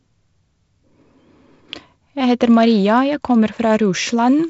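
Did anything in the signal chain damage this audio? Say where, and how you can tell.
No, nothing in the chain has damaged this speech: it has passed through G.722 wideband telephone coding, with the band ending at 7.7 kHz and a light graininess in the lower band that fits the codec running at 48 kbit/s, which is that coding working as designed.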